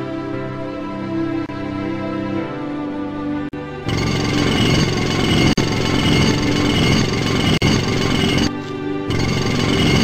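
At 1.46 s, 3.49 s, 5.53 s and 7.58 s, a gap at a join of encoded pieces breaks continuous sound: about 26 ms first, then 43 ms, repeating every 2 s. Untrimmed encoder delay and end padding leave brief dropouts, seen as narrow, soft-edged vertical spectrogram gaps and waveform notches.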